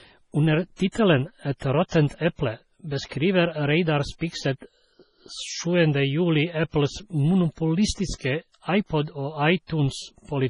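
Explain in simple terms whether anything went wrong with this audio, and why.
The whole clip sounds watery and swirly, with nothing above 10.5 kHz. That is likely heavy MP3 compression. Simple muffling would dull the sound without the swirl.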